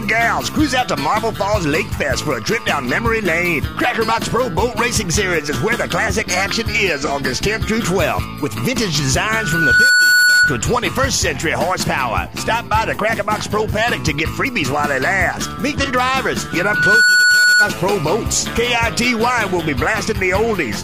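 At 7.05 s there's a brief AAC frame loss with concealment. About 43 ms of audio drops out, which fits a single missing frame. The decoder patches the gap from the last good spectrum, so instead of a hard hole you get a short smeared, noisy blip.

At 9.29 s a loudspeaker feedback squeal kicks in. The mic is picking up its own speaker, and at 1.5 kHz the loop gain tips past one. That tone swells over about half a second to roughly 5 dB above the programme, then holds as a squeal until 10.62 s.

The same concealment glitch turns up again at 15.84 s, another single lost frame of about 43 ms with that same brief smeared patch.

The 1.5 kHz squeal comes back at 16.5 s. It builds just as quickly, sits around 5 dB over the sound, and runs until 17.76 s.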